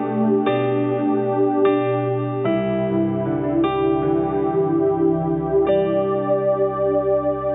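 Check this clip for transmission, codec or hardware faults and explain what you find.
Nothing stood out on listening to this clip.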